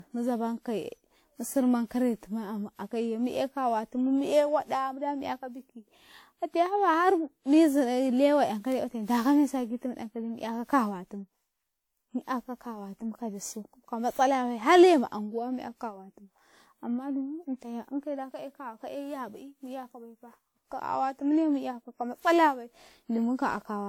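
A speech recording with generation loss throughout. It sounds swirly, smeared and hollow, more than a single encode at this quality would explain. Consonant attacks are blurred. Content stops at about 20.1 kHz. The likely cause is repeated lossy re-encoding, around seven passes, with the character pointing to WMA at roughly 96 kbit/s. Each pass quantised the audio on a shifted frame grid. Noise stacked up with every generation.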